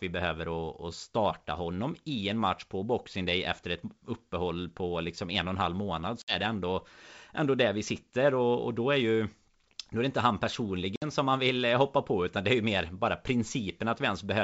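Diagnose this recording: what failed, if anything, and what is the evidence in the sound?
Network packet loss on an ADPCM call: hard-edged flat gaps at 6.22–6.34 s after "och en halv månad" and 10.96–11.06 s after "inte han", then briefly mistracked decoder step size.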